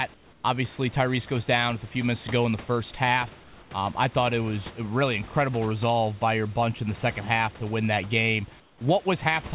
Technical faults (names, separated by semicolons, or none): comfort noise in place of the background